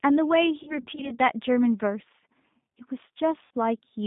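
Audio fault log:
Throughout: G.729 codec. The sound is squeezed into a telephone band of about 150 Hz to 3.7 kHz and rebuilt at 8 kbit/s from a vocal tract filter, a pitch predictor and a few pulses per frame. The damage is plainly audible as a rough, slightly synthetic buzz. On a spectrogram, energy stops sharply near 3.7 kHz and thins below 150 Hz, with smeared harmonics and grainy texture in fine detail.
0.63–1.18 s and 3.45–3.51 s: VoIP packet loss concealed by the speech codec. In the first span, about 160 ms of audio goes missing in scattered gaps across roughly 400 ms, the longest about 60 ms. In the second, about 60 ms goes in one run; both fit lost 20 ms packets. The decoder stretches its last pitch and filter, so the sound turns into a fading buzzy tone or coloured noise and recovers weakly. On a spectrogram, flat, unnaturally steady harmonics appear; the waveform shows shrinking, repetitive cycles.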